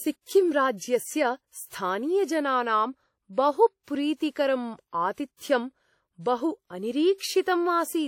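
Throughout the speech, a ringing, washy smear hangs around each sound, with hiss that swells and fades with the signal and nothing above 18 kHz. That points to WMA compression, likely near 48 kbps: long transform blocks spread quantisation noise over tens of milliseconds, unlike MP3's sharper swirly artefacts.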